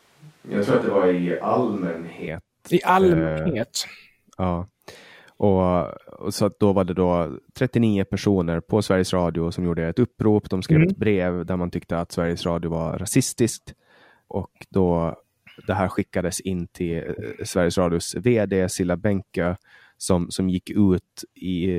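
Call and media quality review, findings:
Switch to a distant microphone, 0.0–2.27 s, under way at clip start: close-mic feed likely missing, pickup from a mic further away. Speech roomy, hollow, thinner bass; level roughly unchanged; room noise around 35 dB below speech; abrupt return at 2.27 s.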